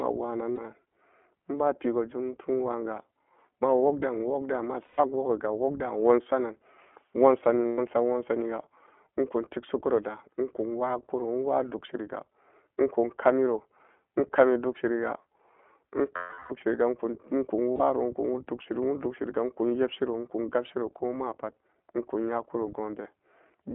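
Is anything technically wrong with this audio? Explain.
Yes, there are two related faults.

The iLBC codec is at work for the whole of this speech clip. The line passes only about 250 Hz to 3.4 kHz, so the speech sounds narrow and muffled. Each 20 ms frame's excitation is coded independently, which fits the 15.2 kbps mode. The coding damage is plainly audible as a rough, slightly synthetic edge on the speech.

Lost iLBC frames appear at 0.52–0.60 s, 4.86–5.00 s, 7.66–7.79 s (just before "nwansaniga ekun tikshikuro"), 16.16–16.53 s and 17.73–17.82 s. The gaps last between about 60 and 340 ms. In each, the decoder repeats the last pitch cycle mixed with noise, which sounds like a held, buzzy vowel. In the longest gap, at 16.16 s, that vowel fades out. Because iLBC frames stand alone, the voice is right again almost immediately after each gap.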